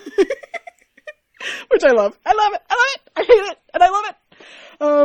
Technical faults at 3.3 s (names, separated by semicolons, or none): adaptive stream at a lower bitrate